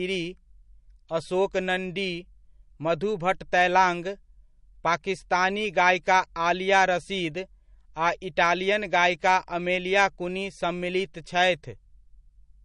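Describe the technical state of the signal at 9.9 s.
At 9.9 s the speech carries the same damage heard across the whole clip, likely MP3 compression: a hard treble cut at 10.6 kHz and weak spectral lines flickering between frames, giving watery, swirly sibilants. A spectrogram shows a flat ceiling and patchy holes, fitting roughly 40 kbps.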